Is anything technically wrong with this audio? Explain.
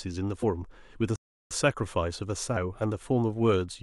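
Yes, there are two faults in this speech clip.

At 0.42 s a brief glitch cuts through the audio. This is damaged data in a compressed stream: some of the encoded bytes were corrupted. The decoder misread or rejected the affected frame, lost its place, and had to hunt for the next valid frame header. The glitch comes from that resynchronisation.

From 1.16 s to 1.51 s the sound drops out completely for about 0.35 s, then resumes. This gap is a playback stall. The likely cause is that the player ran short of buffered data, or its audio thread was briefly blocked, so it had nothing to send to the output. Once data flowed again, playback continued, leaving an abrupt hole in the speech.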